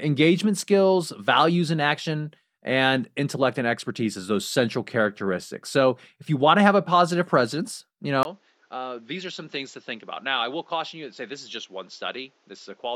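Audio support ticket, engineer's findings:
Input switched to a poorer device, 8.23 s to end, after "a positive presence you". 20 ms gap, then nothing above 7.6 kHz, level about 10 dB lower, new noise floor roughly 35 dB down. Likely a mid-recording capture device change. Gap plus simultaneous level, noise and band change rule out a codec bandwidth drop.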